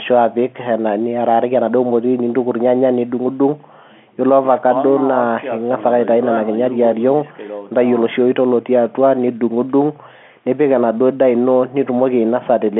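No technical faults are audible anywhere in the speech.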